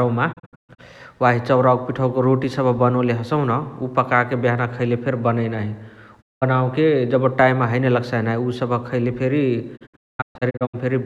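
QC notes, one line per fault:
0.32–0.80 s, digital broadcast dropout: the sound drops out in several short holes spread over about 0.45 s, the longest about 0.13 s, each with a quick 20 ms fade, before "वाही चौरावक पिठवक रोटी" comes back. The receiver is muting bad frames, and the hole lengths fit frames of about 32 ms.
6.20–6.44 s, digital broadcast dropout: one solid gap of about 0.19 s with the same 20 ms fade.
9.76–10.76 s, digital broadcast dropout: the worst one. Holes are scattered over nearly a second, with about 0.6 s lost in total and the longest run about 0.22 s.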